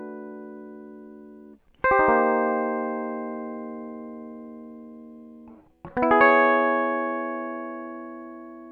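No technical faults can be heard anywhere in this music.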